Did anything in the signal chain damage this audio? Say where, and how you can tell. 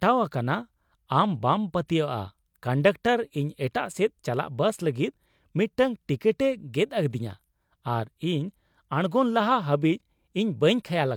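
No, nothing along the way has left a mark on this speech recording. Every stage from capture to playback passes the audio on without any audible damage.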